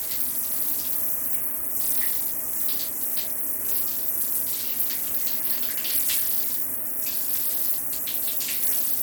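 From start to finish the treble drops out and flickers, while a gritty, grainy noise with aliasing rides on the sound. This is plainly audible damage, likely from Bluetooth SBC compression at a starved bit pool, consistent with roughly 96 kbps, leaving the top sub-bands few bits.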